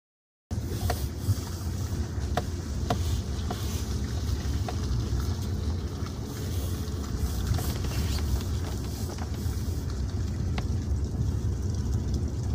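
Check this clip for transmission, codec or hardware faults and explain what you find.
One fault is present, right at the opening. From 0 to 0.51 s there is dead digital silence, and at 0.51 s the sound jumps in mid-flow with no attack or fade. This is a cut-off start: capture or streaming began late, so the recording joins a sound already underway.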